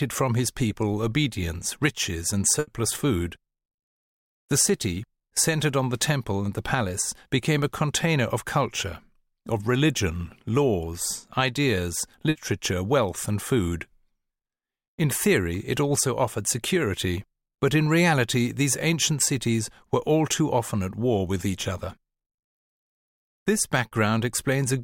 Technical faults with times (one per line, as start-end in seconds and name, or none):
2.59-2.69 burst of packet loss
12.29-12.37 burst of packet loss
23.87-23.93 short concealed packet loss